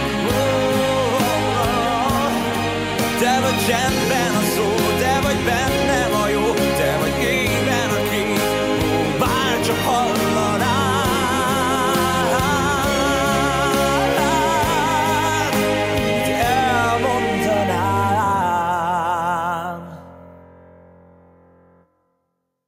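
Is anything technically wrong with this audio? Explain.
No, nothing technically wrong turns up here, so there's no fault to walk through.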